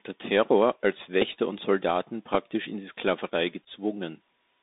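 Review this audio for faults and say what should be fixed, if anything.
The Bluetooth CVSD headset codec shapes the whole speech clip. Its one-bit, step-adaptive coding at 64 kHz leaves a band of roughly 250 Hz to 3.7 kHz, with scratchy sibilants and granular hiss beneath everything. On a spectrogram, energy stops abruptly near 3.7 kHz over a grainy noise floor. Prevent it by recording through a wired or wideband microphone path rather than the headset's narrowband voice link.

The Bluetooth headset packet repeated fault occurs at 1.22 to 1.26 s, at 2.35 s just before "in die", and at 3.64 to 3.68 s. When lost packets are replaced by replaying the last packet's bits, the 3.75 ms repeat gives the first and third events a brief buzz near 267 Hz, while the lone repeat at 2.35 s is only a tick. The waveform shows identical short segments copied back to back, and the spectrogram shows harmonic striping at 267 Hz spacing. 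Prevent it by keeping the headset close to the host and clear of 2.4 GHz interference so packets arrive intact.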